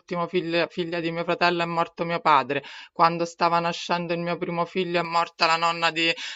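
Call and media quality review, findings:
Pre-emphasis left on, 5.05 s to end: speech turns thin, bright, hissy on sibilants. Treble boost never undone, roughly 11 dB up at 10 kHz versus 1 kHz, fits a J.17 curve.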